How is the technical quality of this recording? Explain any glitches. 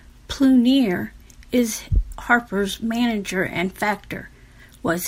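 No audible glitches or faults.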